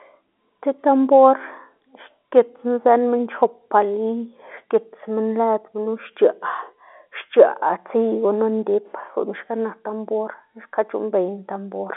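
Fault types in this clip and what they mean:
Nothing stood out on listening to this speech recording, which comes across as ordinary telephone-band audio.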